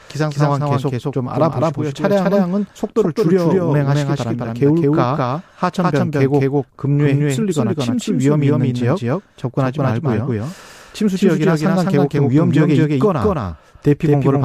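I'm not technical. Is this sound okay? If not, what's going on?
No. A doubled audio track runs throughout: the speech repeats about a fifth of a second later, just as loud, likely from being recorded twice.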